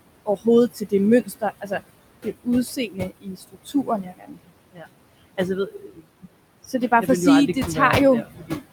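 The noise suppressor treats every band it judges to be steady background as noise and pulls it down frame by frame, by about 21 dB here. Between phrases the room noise, which sits about 12 dB under the speech, sinks away and then swells back underneath each phrase. These noise suppressor artifacts run through the whole clip.

The same suppressor also mistakes parts of the speech for noise, producing speech cut by the noise suppressor. This happens at 0.26 to 0.46 s, 1.22 to 1.43 s, 1.61 to 1.80 s, 2.76 to 4.53 s, 4.72 to 4.86 s, 5.67 to 6.27 s and 8.23 to 8.51 s, with drops of about 12 to 22 dB. Most of these last around a tenth of a second and swallow soft consonants or word endings. The long stretch from 2.76 s loses about a second of speech in total, and the one near 5.7 s loses close to half a second, so quieter passages there sound faint and swallowed.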